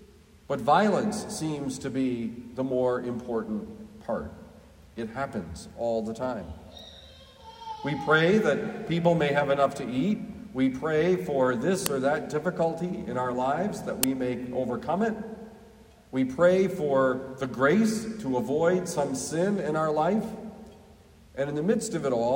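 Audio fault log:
11.86 s and 14.03 s: uninitialised buffer, 5 ms of leftover memory played as samples, heard as loud cracks; sharp waveform spikes, broadband spectrogram stripes.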